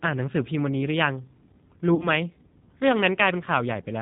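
From the start the whole thing is squeezed through the G.729 codec, consistent with an 8 kbit/s stream. Nothing gets above 4 kHz, and because the decoder rebuilds the speech from a filter, a pitch predictor and a few pulses per frame, it comes out plainly rough and a bit synthetic.

Around 1.95 to 2.04 s there's VoIP packet loss concealed by the speech codec. About 40 ms goes missing, which fits two lost packets. The decoder stretches its last pitch and filter into a buzzy tone or coloured noise that fades, and the following frames stay weak or distorted for a moment while it recovers.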